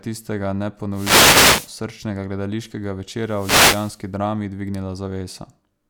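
Speech with two wireless microphone noise hits. The first runs from 0.92 to 1.73 s, just before "srčnega gledališkega". The second runs from 3.19 to 4.06 s, right after those words. Each is a burst of static, lasting about 0.8 s and 0.9 s respectively. The radio link from an analogue FM microphone fades as reflected signals cancel. Receiver noise then rises over the voice.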